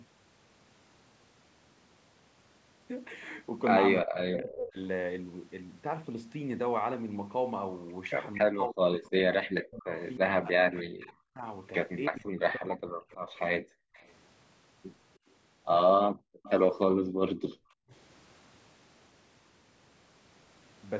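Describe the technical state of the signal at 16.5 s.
At 16.5 s two problems overlap. The background is gated by the echo canceller from 16.11 to 17.9 s. While the far-end loudspeaker signal was active, the canceller pulled the microphone level down hard to suppress it, taking the room sound down by as much as about 40 dB. The ambience drops away and comes back, adding up to roughly a second of missing background across that span.

Within that window, from 16.43 to 16.82 s, a faint delayed copy of the speech can be heard trailing the original by 309 ms, at a level roughly 20 dB below the direct speech. This is likely an echo leak. The loudspeaker playback at one end reached its microphone, and the echo canceller did not fully remove it, so a short residual was sent back down the line.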